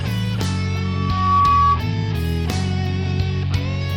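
A single 1.1 kHz tone swells over about half a second into a squeal from 0.83 to 1.81 s, rising a few decibels above the audio: loudspeaker feedback squeal.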